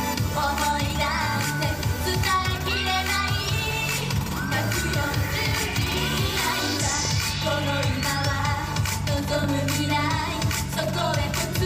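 Two loud pops cut through the sound, at 7.05–7.07 s and 9.44–9.46 s, the second louder, about 10 dB above the signal versus about 5 dB, likely voltage spikes from a plug, switch, static or driver glitch.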